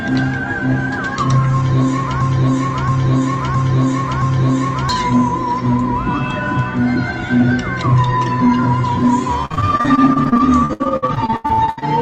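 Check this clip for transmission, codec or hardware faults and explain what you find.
Two transmission faults are present. From 2.21 to 4.89 s, a broken-record loop: the stream likely stalled and resent its last 0.67 s fragment four times, so that sound stutters identically and the intended audio is lost. From 9.45 to 11.84 s, repeated packet loss leaves around thirty gaps up to 80 ms. Concealment patches about a third of this stretch, making it choppy.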